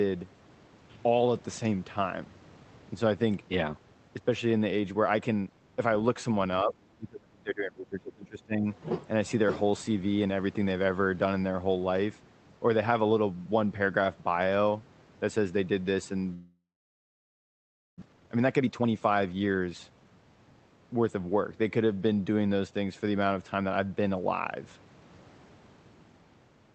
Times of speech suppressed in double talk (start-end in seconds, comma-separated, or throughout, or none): 6.63-8.67